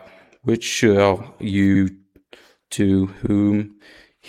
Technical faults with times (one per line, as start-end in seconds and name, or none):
1.74-1.81 repeated frames
3.25-3.30 repeated frames